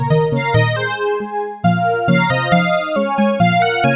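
No technical faults can be heard anywhere in the clip. The sound passes through a working call path whose narrow band, with nothing above 4 kHz, fits a 64 kbps G.711 A-law telephone codec.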